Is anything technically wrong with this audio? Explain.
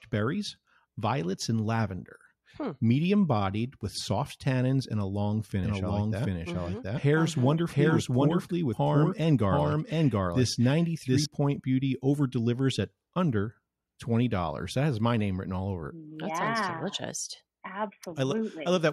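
Yes. From about 5.64 s to 11.26 s the speech has a doubled audio track: a second, full-band copy runs roughly 0.7 s behind the original at about the same level. It's bone dry, with no decay or room colour, and it cuts in and out abruptly at both ends. That points to the signal likely being picked up twice, once through a slower path, or to an edit leaving two out-of-step copies stacked.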